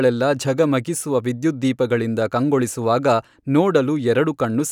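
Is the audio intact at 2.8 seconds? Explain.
Yes, at 2.8 s the speech runs through intact, with no dropout, click, distortion or other break in the signal.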